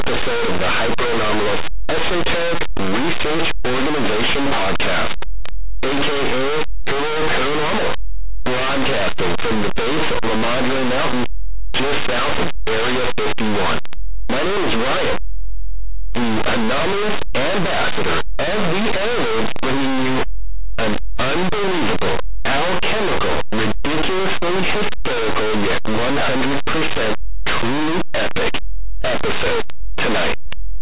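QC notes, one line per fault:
Throughout, linear audio read as companded: plain linear 8-bit speech samples are being decoded as if they were mu-law codes, so values just to one side of zero expand into the largest outputs while their neighbours stay small, giving very loud, harsh distortion over the whole speech signal.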